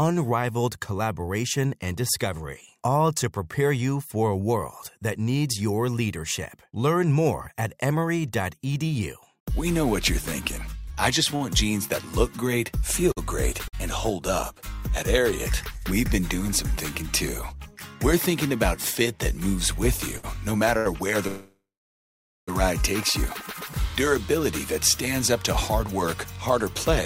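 From 11.31 to 13.75 s, scattered short gaps: around seven late or lost packets, the longest about 50 ms, were patched by extending the previous sound, leaving brief ticks and smears.

From 16.04 to 17.72 s, a jitter buffer speed-up: the overfull buffer trimmed pitch-period slices, about 50 ms in total, so the audio runs 2% fast at unchanged pitch.

Between 19.09 and 20.87 s, repeated stalls (stutter) occur: the buffer emptied three times and was bridged with 142 ms of continued sound, the longest gap 81 ms, so the audio drags and catches.

From 21.27 to 22.49 s, a call audio freeze, likely from packets held up in transit, stretches the last sound into a fading tail, then 870 ms of silence. Playback resumes 1.2 s late.

From 24.39 to 26.60 s, a second jitter buffer speed-up removes about 100 ms, so the audio runs 4% fast.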